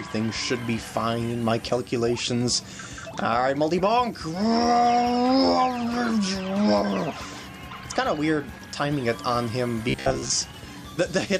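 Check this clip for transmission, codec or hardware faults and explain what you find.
One fault stands out, near the end. From 9.90 to 10.31 s the sound collapses into a rigid, metallic buzz pitched at about 66.7 Hz, loosely tracking the original contour but with its natural texture gone. This is robotic sound from repeated short buffers. The likely cause is audio arriving too slowly, so playback loops a fragment of roughly 15 ms, whose repetition rate sets that buzz, while most of the real audio in that stretch is skipped.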